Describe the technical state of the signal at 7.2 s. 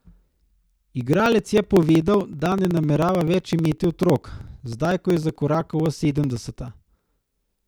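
At 7.2 s the speech is inside a run of periodic USB or driver dropouts spanning 0.06 to 7.62 s. Every 0.063 s roughly a millisecond of audio is skipped, producing steady ticks during voiced sound, visible as evenly spaced thin vertical broadband lines and waveform discontinuities.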